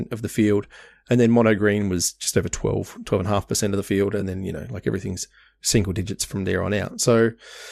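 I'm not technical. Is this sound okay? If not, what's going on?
No, there is a tiny glitch at about 4.21 s, an AAC frame loss with concealment. About 10 ms of audio never arrived, which fits one lost frame, and the decoder patched it with a brief smeared, noisy blur rather than a click or a silent gap.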